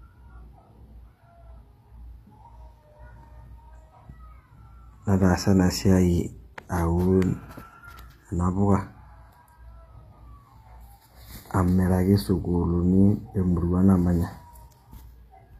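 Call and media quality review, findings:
Speech treble gritty and lispy throughout, s sounds metallic; likely HE-AAC compression, spectral band replication patching copied low bands upward, harmonics misaligned above crossover, fits about 24 kbps. Spectrogram: smeared, repeated treble texture, hard ceiling at 14.9 kHz.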